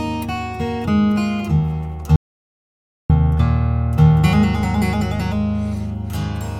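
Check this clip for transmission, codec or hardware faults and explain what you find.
There's one clear fault: an audio dropout to silence from 2.16 to 3.10 s. The sound cuts off mid-flow and returns about 0.94 s later, with silence in between and no room tone. That points to the input likely being lost briefly, a disconnect or stray mute, while recording carried on.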